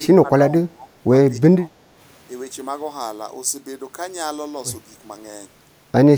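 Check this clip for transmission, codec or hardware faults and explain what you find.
There is one fault, heard twice.

Speech suppressed in double talk, from 0.0 to 0.91 s and again from 1.38 to 1.98 s. While the far side spoke, the echo canceller likely could not tell this talker from returning loudspeaker echo, and it pulled both down together. The speech dips by up to around 20 dB across most of each span.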